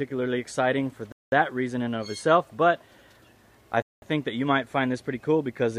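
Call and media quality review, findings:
Gap between chunks: 200 ms holes at 1.12–1.32 s and 3.82–4.02 s, one per 2.5 s chunk. Probably padding or late chunk start in the player. Nothing lost, just interrupted.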